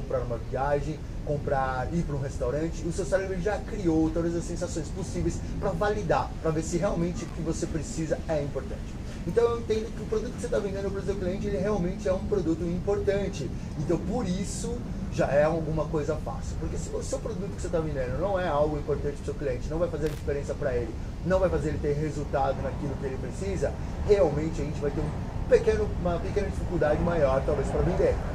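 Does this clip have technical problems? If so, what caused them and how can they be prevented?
Yes. Two short, irregular bursts of crackle and scratching break into the audio, from 7.26 to 7.34 s and again from 20.07 to 20.20 s. This is loose connector crackle: a worn or dirty contact in the signal path briefly makes and breaks as it shifts, chopping the audio on and off. Cleaning or replacing the connectors and securing the cables so they cannot move would prevent it.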